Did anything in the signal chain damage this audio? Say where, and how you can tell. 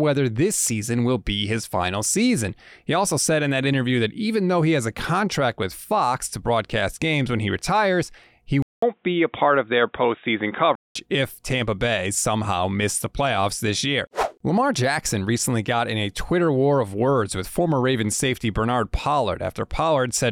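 Yes. Input switched to a poorer device at 8.62 to 10.95 s, after "when he retires he": a 0.2 s gap, then speech dulled above 3.8 kHz with a faint new noise floor, level unchanged. The driver likely moved capture to a narrower-band microphone.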